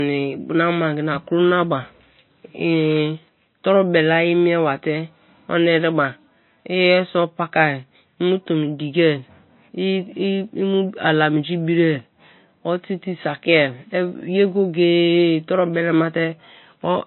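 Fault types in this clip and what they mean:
Low-bitrate audio saved at a high bitrate: the speech has nothing above 4.1 kHz for its whole length and carries the dulled, smeared texture of heavy MP3 compression, despite the large file. This likely comes from an MP3 first encoded at a very low rate, around 24 kbit/s, then saved again at a high rate, which cannot restore what was discarded. A spectrogram shows a hard, flat ceiling at 4.1 kHz across the clip.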